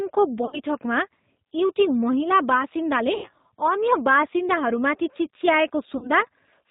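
The speech runs through a G.729 codec at 8 kbit/s throughout, rebuilt from a vocal tract filter, a pitch predictor and sparse pulses, with nothing above 4 kHz. The speech sounds plainly rough, dull and synthetic across the whole clip.

VoIP packet loss concealed by the speech codec appears three times. From 0.45 to 0.60 s, about 70 ms is missing in scattered gaps, the longest 40 ms. From 3.15 to 3.31 s, 90 ms is missing just before "अन्य बासिन्दाहरूमाथि". From 5.97 to 6.10 s, 50 ms is missing. Each time the decoder extends its last pitch and filter at falling gain, so the speech smears into a fading buzz or coloured noise and stays weak briefly after.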